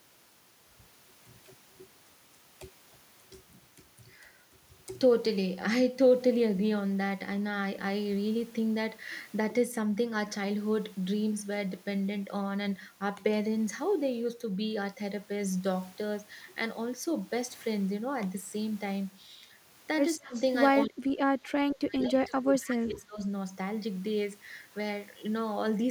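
At 20.17 to 20.35 s the speech dips hard, by roughly 25 dB, for a fifth of a second. That's speech suppressed in double talk, most likely an echo canceller mistaking overlapping talk for echo and ducking everything. It comes back worse from 20.84 to 23.23 s, dropping by roughly 35 dB for about two seconds. Right at 20.34 to 20.41 s there's a faint echo leak, a delayed copy of the voice about 211 ms behind and sitting around 25 dB down, probably loudspeaker pickup the canceller didn't fully remove.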